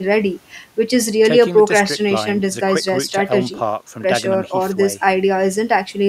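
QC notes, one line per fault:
Nothing to flag here, so this speech clip can go through without any QC notes.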